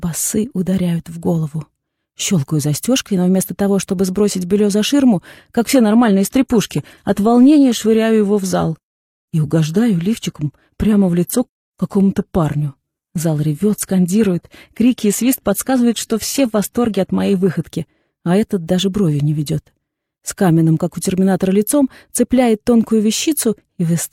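An adaptive stream dropping to a lower bitrate runs from 5.66 to 17.66 s. The player switched abruptly to a leaner version of the stream, with no gap at either edge, and back again at 17.66 s. Across those twelve seconds nothing remains above 14.9 kHz, and codec artefacts rise. That character points to a shift from around 96 kbit/s AAC down to roughly 24 kbit/s HE-AAC.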